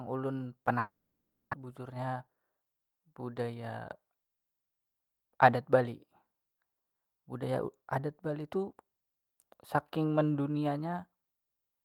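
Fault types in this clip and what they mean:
Long network dropout: At about 0.79 s the speech breaks off into a fading buzz that stretches the last sound, then settles into roughly 0.57 s of near-silence before the audio returns at about 1.55 s with around 0.6 s of material simply gone. It was likely caused by packets failing to arrive for that stretch. Unlike a brief concealed packet loss, the fill lasts far beyond a few tenths of a second and ends in silence.
Jitter buffer speed-up: Right after the gap, from about 1.63 to 2.66 s, the speech runs about 11% fast while its pitch stays put. The receiver trims tiny pitch-period-sized pieces again and again to shed roughly 150 ms of extra buffered delay, so the talking sounds hurried rather than higher. That steady pitch separates it from a clock or resampling error, which would raise pitch along with tempo.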